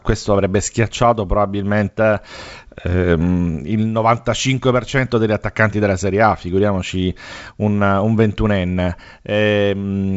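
No technical faults can be heard in this speech.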